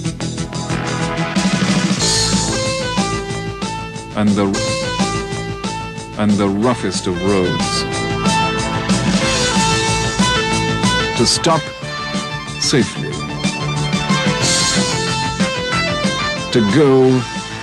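The audio contains a stream segment repeated fault: from 4.53 to 6.55 s, about 2.02 s of material plays again, with a small blip at the jump back.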